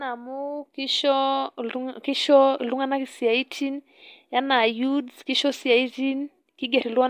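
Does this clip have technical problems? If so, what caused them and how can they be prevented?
No, there are no technical problems in this clip.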